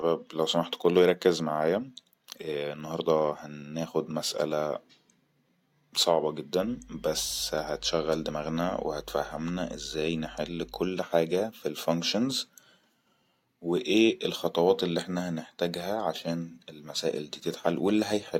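Mains hum runs from 6.62 to 10.88 s: a steady low 50 Hz tone sits under the speech, around 25 dB below it, where a ground loop or nearby transformer has let the power line bleed into the signal path.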